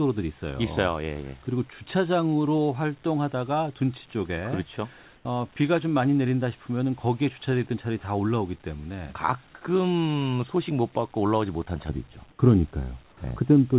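From 5.16 to 5.25 s, a brief pause of about 90 ms has its real background replaced by a smooth, featureless hiss, about 4 dB quieter than the room sound around it. This is comfort noise in place of the background. The likely cause is discontinuous transmission, where the sender stopped sending during the gap and the receiver filled it with synthetic noise. On a spectrogram, the textured background becomes a short, uniform grey patch. On the waveform, it is a slightly thinner, even band.

From 11.89 s to the end of the clip, the sound turns dull and muffled because de-emphasis was applied wrongly. A treble cut meant to undo pre-emphasis was applied to audio that did not need it. The result is a smooth downward tilt toward the high frequencies, at a rate that would reach about 11 dB down at 10 kHz relative to 1 kHz. The call path already removes everything above 4 kHz, so the loss shows within that range. 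On a spectrogram, the upper part of the band fades progressively from 11.89 s. On the waveform, the sound looks rounder, with softer edges.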